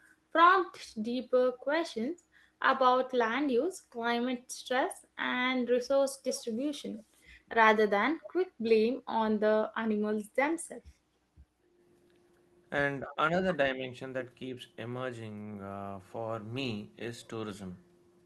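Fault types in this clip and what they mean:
Echo leak: A delayed copy of the far side's voice returns at 6.28 to 6.44 s and again briefly at 8.66 s, trailing by 237 ms. It is likely leakage past a loudspeaker echo canceller. Unlike a room reflection, it is a separate repeat, clearly below the speech the first time and very faint the second.
Background gated by the echo canceller: Around 11.63 to 11.79 s the room sound dips by about 9 dB for roughly 150 ms, then comes back. The canceller clamped the microphone while the loudspeaker played. Only the background drops, and no talker is cut, which sets it apart from double-talk suppression.
Speech suppressed in double talk: At 13.07 to 13.18 s the talker's own voice dips by about 10 dB for a brief moment, around 50 ms. The likely cause is the canceller turning everything down while both sides spoke. Unlike gating, the voice itself is lost, not just the room sound.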